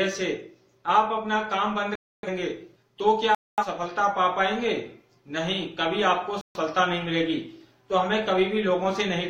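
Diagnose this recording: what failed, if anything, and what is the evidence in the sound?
The failure is at the codec decoding stage: corrupt frame muted. The audio drops abruptly to digital silence three times, at 1.95 to 2.29 s, 3.35 to 3.64 s, and 6.41 to 6.60 s. The holes last about 0.33 s, 0.30 s and 0.19 s, which fits runs of several consecutive compressed frames. Bit errors made those frames undecodable, so the decoder rejected them and the player substituted silence. Playback resumes on schedule after each gap, so timing is preserved.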